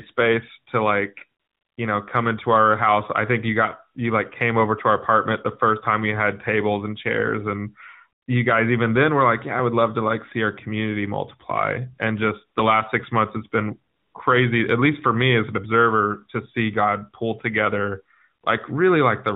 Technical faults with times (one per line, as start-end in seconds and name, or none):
1.40-1.78 AMR comfort noise
8.22-8.28 AMR comfort noise
13.94-14.14 AMR comfort noise
18.42 AMR comfort noise